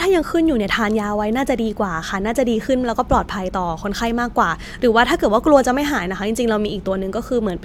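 Nothing goes wrong anywhere in this speech recording, so there's no technical fault to point to at any moment.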